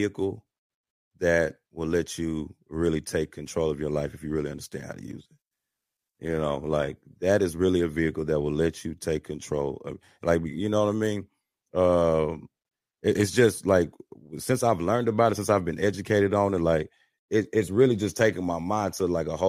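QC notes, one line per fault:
5.20–7.20 s, adaptive stream at a lower bitrate: right after "really understand how to" the sound abruptly loses its crispness, with the top end turning thin and synthetic and a swirly, smeared codec texture rising, with nothing heard above 14.8 kHz. There is no dropout or gap. Quality snaps back by "that is really a". The stream switched to a lower-quality rendition while the connection slowed, which fits a move from 96 kbit/s AAC-LC to 20 kbit/s HE-AAC and back.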